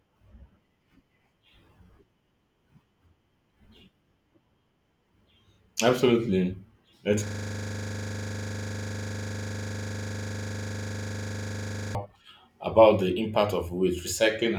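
A system hang loop interrupts this speech clip: from 7.27 to 11.95 s the system froze while playback recycled one 40 ms buffer, producing a 25 Hz buzz.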